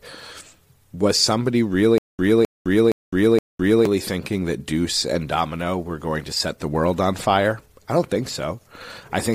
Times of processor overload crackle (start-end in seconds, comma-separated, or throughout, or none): none